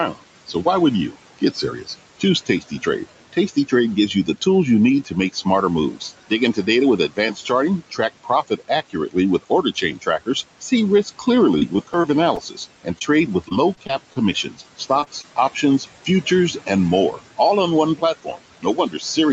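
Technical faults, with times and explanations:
Throughout, noise suppressor artifacts: The background is pushed down by about 18 dB between phrases. It swells back under the speech.
0.11–4.46 s, 5.04–17.39 s and 17.96–19.33 s, speech cut by the noise suppressor: Quiet speech is mistaken for noise and dropped by up to about 19 dB. About a second goes before "you need", about three seconds between "you need" and "on one", and more follows "on one". Those parts sound swallowed.
11.35–12.39 s, 13.49–14.17 s and 14.63–15.26 s, repeated packet loss (robotic sound): Packets keep going missing, with gaps of up to about 27 ms each. Each gap is patched by stretching the last sound, so these stretches turn choppy and robotic.
12.99–13.03 s, short concealed packet loss: About 20 ms of audio never arrives. The receiver fills it by continuing the previous sound, leaving a brief smear.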